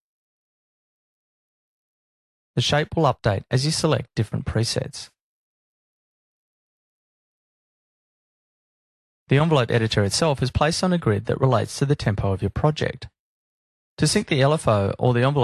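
No technical faults are audible.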